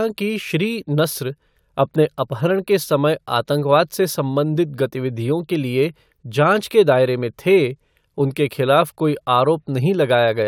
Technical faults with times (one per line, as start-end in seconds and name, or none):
none